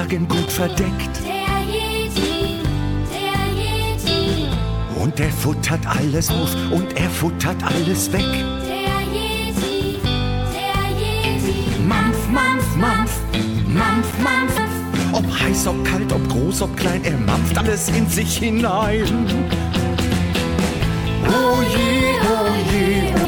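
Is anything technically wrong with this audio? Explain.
Yes, there are two faults.

Loose connector crackle at 0.40–0.61 s and 14.09–14.27 s: a worn contact chops the signal, giving scratchy bursts that show as jagged waveform dropouts and broadband vertical streaks.

Damaged data in a compressed stream at 6.26–6.30, 14.54–14.58, 17.57–17.61, 20.08–20.12 and 23.21–23.26 s: the decoder misreads corrupt frames, producing brief chirps, squawks, clicks or short holes that appear as short, smeared spectral blocks.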